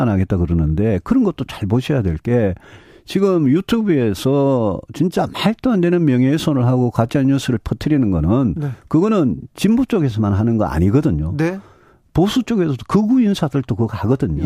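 Nothing technically wrong turns up in this speech recording; every stretch of it holds up without a single fault to point to.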